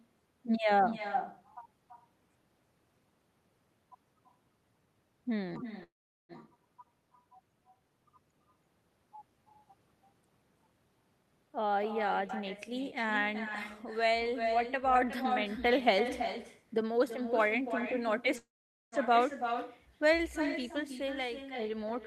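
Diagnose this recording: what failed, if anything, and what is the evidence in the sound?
Echo with no canceller, throughout: every phrase returns about a third of a second later, roughly 9 dB down. The far end's loudspeaker feeds its microphone uncancelled.

Call audio freeze at 5.83–6.32 s and 18.38–18.95 s: sound stalls, trails off into silence, then resumes where it stopped. This is likely late packets emptying the jitter buffer.

Jitter buffer speed-up at 11.49–12.22 s (117% speed) and 20.66–21.92 s (104%): the audio runs faster at unchanged pitch as the receiver trims pitch periods to cut delay, and in the first the speech hurries.

Skip ahead at 12.28 s: roughly 200 ms of speech vanishes and the two sides join almost seamlessly, as the network or an overflowing buffer dropped queued audio.

Jitter buffer slow-down at 12.70–13.50 s and 13.97–15.23 s, both at 92% speed: speech drags at the same pitch as repeated pitch periods rebuild the buffer's reserve.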